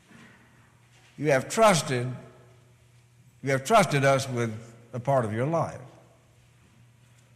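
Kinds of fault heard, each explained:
No technical faults can be heard in the recording.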